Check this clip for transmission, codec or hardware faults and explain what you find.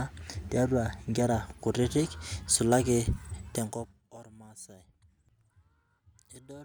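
One fault stands out: zipper noise between 3.50 and 4.10 s. During this stretch the speech is being turned down by roughly 25 dB, but the gain moves in unsmoothed 3 dB jumps, about ten a second, rather than gliding. Each jump is an instant discontinuity in the waveform, so it leaves a small click. Strung together, those clicks form a rapid ticking or zipping laid over the speech for as long as the fade lasts.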